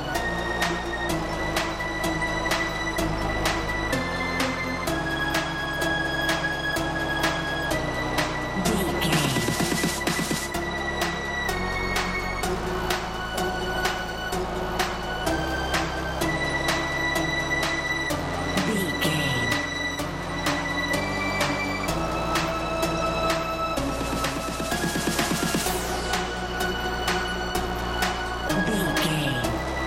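No faults can be heard anywhere in this clip; the signal comes through with no dropouts, distortion, clicks, noise bursts or timing errors at any point.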